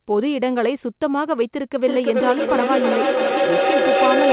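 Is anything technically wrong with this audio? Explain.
Yes. From 1.85 s to the end, there is feedback echo between two devices. A second device on the call replays this microphone's signal, which is picked up again beyond the echo canceller's reach. The sound returns roughly every 0.3 s, growing thinner and more ringing. The repeats pile up to about 2 dB above the direct speech instead of fading. Reverberation smears continuously, whereas these are discrete repeats that grow. All of this sits inside the call's 4 kHz band limit.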